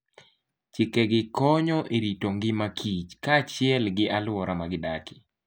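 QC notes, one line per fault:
No technical faults are audible in the speech recording, with the signal holding steady and continuous from the first moment to the last.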